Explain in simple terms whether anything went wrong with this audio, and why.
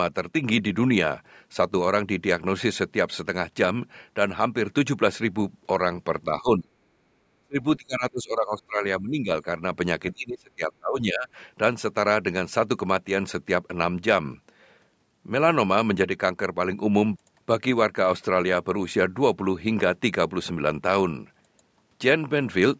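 Two things went wrong, both in the call's echo canceller.

Speech suppressed in double talk: when both sides of the call spoke at once, the canceller likely could not tell this talker's voice from the echo of the other side coming out of the loudspeaker, so it turned everything down. The voice sinks sharply or breaks up at 6.4 to 6.71 s, 7.41 to 7.58 s, 7.78 to 8.83 s, 9.0 to 9.3 s and 10.13 to 11.29 s. The longest dips last about a second.

Background gated by the echo canceller: while the loudspeaker was playing, the canceller clamped down on the microphone. The room sound behind the voice briefly drops away between 6.99 and 7.13 s, a gap of about a sixth of a second, and then comes back once the canceller releases its grip.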